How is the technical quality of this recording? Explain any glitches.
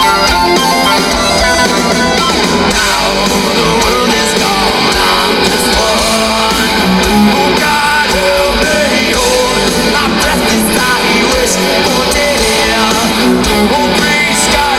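The recording is hard clipped throughout its length. The signal reaches a stage about 5 dB hotter than that stage can pass, so every peak that crosses the ceiling is sliced off flat. Only a small share of samples, somewhere around one or two percent, actually hit the limit. The damage is therefore confined to the loudest moments. The squared-off tops generate high harmonics that were never in the original, and these are heard as brief crackle and grit whenever the sound peaks.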